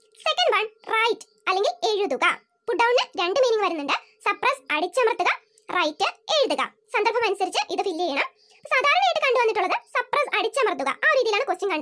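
From start to finish the audio runs fast and high, the classic wrong sample rate fault: samples are played out quicker than they were captured, with no conversion. Everything is about 1.38 times too fast and about 5.5 semitones too high, which fits 16 kHz material played at 22 kHz. Speed and pitch move together in exactly that ratio, unlike a pitch shift or time-stretch, where one changes and the other holds steady.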